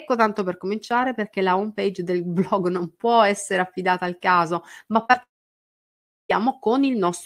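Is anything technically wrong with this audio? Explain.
Yes. The speech has two kinds of fault, close together near the end.

From 5.03 to 5.15 s there is short concealed packet loss. Three back-to-back gaps, each about 20 ms, run from 5.03 to 5.07 s, 5.07 to 5.11 s and 5.11 to 5.15 s. The receiver stretches the preceding sound to cover each hole, so the speech smears and wobbles briefly.

From 5.23 to 6.31 s there is what is likely a long network dropout. About 1.06 s of speech is lost. The last sound carries on only for a moment. Then about a second of near silence follows. Speech resumes at 6.31 s with that stretch missing.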